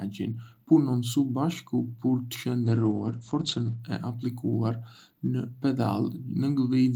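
From 2.67 s to 3.85 s the speech turns muffled and rough, with a watery quality, and the top end closes in to a cut-off near 8 kHz from the full 20 kHz band before and after. This is a call bitrate drop. The connection's bandwidth estimate fell, so the encoder coded far more coarsely and trimmed the highs. The degradation, consistent with a fall from about 32 kbps to roughly 11 kbps, bottoms out for about 1.1 s before recovering.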